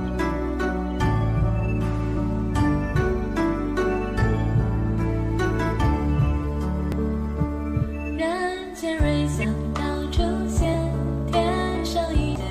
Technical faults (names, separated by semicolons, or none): compressed frames skipped